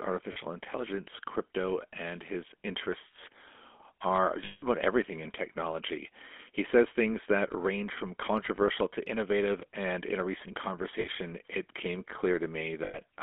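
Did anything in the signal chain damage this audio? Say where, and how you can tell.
Yes. The codec stage damaged it throughout. This speech carries the gritty, buzzy roughness of the GSM full-rate codec. The band sits between about 250 Hz and 3.4 kHz, with nothing above that. The coder models the vocal tract and drives it with a thinned, regularly spaced pulse excitation. That coarse excitation is what makes the voice sound gravelly. The damage is plainly audible, and the character fits a 13 kbps full-rate stream.

The network damaged it too, in four places, each heard as lost GSM frames. At 0.32 s and at 11.0 s, a 40 ms stretch holds on a brief metallic ring. At 4.44 s there is a 180 ms hold. It rings roughly. At 12.84 s a 100 ms hold does the same. The decoder replays the last good frame's settings. The lengths fit whole 20 ms frames.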